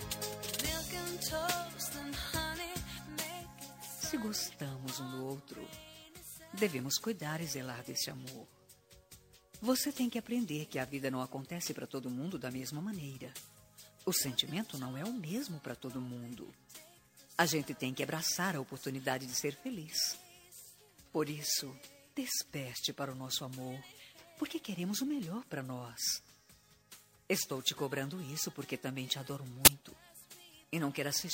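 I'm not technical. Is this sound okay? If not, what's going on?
No. At 29.65 to 29.68 s there's a short, harsh burst of digital noise, an uninitialised buffer: the player sent out leftover junk memory before the real audio arrived.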